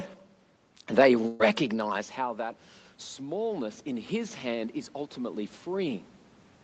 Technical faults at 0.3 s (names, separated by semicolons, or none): none